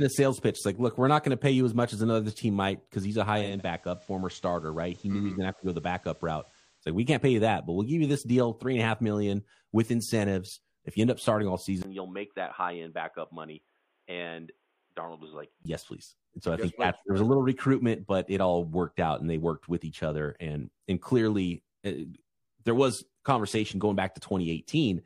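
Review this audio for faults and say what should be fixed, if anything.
From 3.33 to 6.90 s, after "might because he's a" and before "we can't pay you", digital radio blending to analogue occurs. The receiver cross-fades over about 0.3 s to the FM simulcast. The level drops about 3 dB, and hiss rises to roughly 30 dB below the speech. A smooth fade with hiss sets it apart from a device switch. Improving reception or disabling automatic blend would prevent it.

From 11.83 to 15.65 s, starting after "end up starting all", a short 20 ms silence is followed by sound that is boxier and narrower. The level falls by roughly 5 dB, and a different noise floor sits well below the speech. The likely cause is an input switched to a poorer device, such as a headset's call profile. The hard cut and narrower band tell it apart from the radio blend, which fades gradually and adds hiss. Locking the recording input would prevent it.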